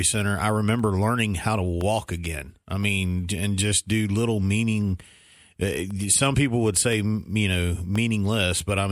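A speech clip with periodic USB or driver dropouts. Starting just after "center I" at 0.79 s and running to 7.96 s, a tiny gap of silence, about half a millisecond, falls every 1.02 s. Each is heard as a regular tick while speech is sounding.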